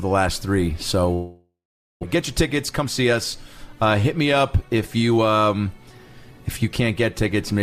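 At 1.13 s the sound stops and a fading buzz continues it. After a few tenths of a second only near-silence remains, about 470 ms of it. The audio returns at 2.05 s, about 600 ms further on. This is likely a long network dropout.

From 2.15 s to 5.18 s a jitter buffer speed-up follows. The receiver trims tiny pitch-period slices repeatedly to shed the built-up delay, roughly 300 ms. Playback runs at 109% speed with unchanged pitch, sounding hurried.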